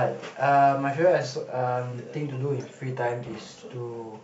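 No technical faults can be heard anywhere in the speech signal.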